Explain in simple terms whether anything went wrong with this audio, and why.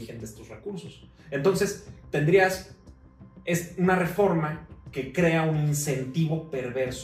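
Nothing stood out on listening to this audio that would suggest anything went wrong.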